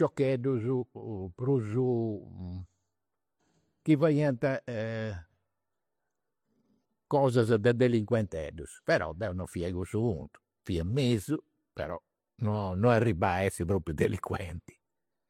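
Transcoding between lossy codecs runs throughout this speech clip: MP3 artefacts and HE-AAC artefacts are heard together, with nothing above 18.4 kHz. The likely cause is a low-rate MP3 re-encoded to HE-AAC, the second codec spending bits on the first codec's damage while adding its own.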